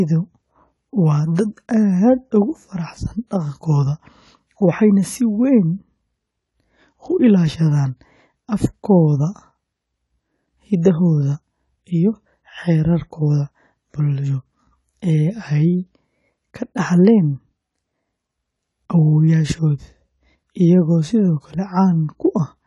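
AAC compression runs through the whole of this speech recording, leaving plainly audible codec damage. Nothing sounds above 11.5 kHz, and sibilants turn fizzy and smeared. The likely cause is AAC-LC at a low bitrate, around 32 kbps, quantising away high-frequency detail.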